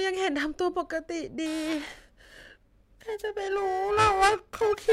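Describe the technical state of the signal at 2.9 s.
Periodic clock jitter runs from 1.46 s to the end, wobbling the converter's clock at around 1 kHz. That adds paired sidebands about that far either side of every speech component, giving a metallic roughness that disappears in pauses, unlike random jitter's broadband noise.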